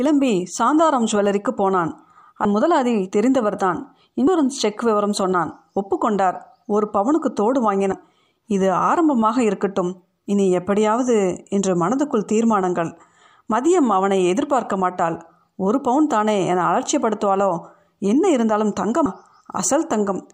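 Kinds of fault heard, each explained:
Compressed frames skipped: at 2.45 and 4.27 s the speech leaps ahead about 150 ms as a few 32 ms frames vanish.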